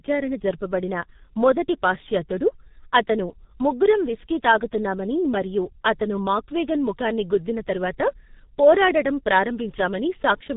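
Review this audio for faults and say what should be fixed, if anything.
Throughout the clip, the speech has been squeezed through a G.723.1 codec, and heavily. The sound fits its 6.3 kbit/s mode. Long 30 ms frames and a slowly updating voice model leave it muffled and hoarse, with nothing above 3.8 kHz and blurred consonants. Carry the call on a wideband codec such as Opus at a higher bitrate instead.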